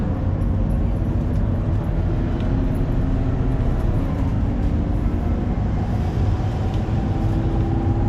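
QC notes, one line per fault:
4.35–4.39 s, repeated frames: a 40 ms block of compressed data, which fits two frames, was written or sent twice. The decoder plays that sliver again, so the sound stutters briefly and the clip runs 40 ms longer than it should.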